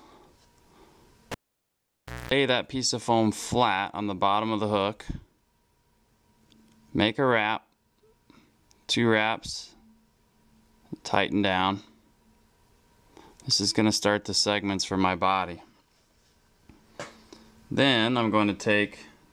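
A live cable is pulled and plugged in again between 1.32 and 2.32 s. A pop opens a near-silent gap of about 0.95 s, then 60 Hz mains buzz lasts about 0.22 s while only the plug tip makes contact, and a second pop marks the audio returning.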